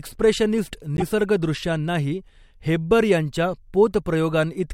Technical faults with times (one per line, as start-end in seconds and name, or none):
0.97-1.02 damaged data in a compressed stream